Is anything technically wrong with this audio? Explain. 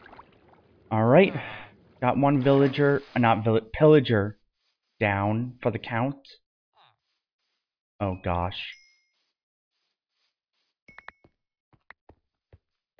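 No, nothing technically wrong can be heard here.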